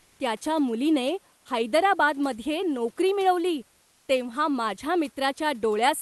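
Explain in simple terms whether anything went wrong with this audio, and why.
In three pauses, from 0 to 0.19 s, 1.37 to 1.45 s, and 3.81 to 4.07 s just before "तेव्हा माझ्या", the real background drops out and is replaced by comfort noise: a steady, slightly quieter hiss. This likely happens because the call sender stops transmitting during silence.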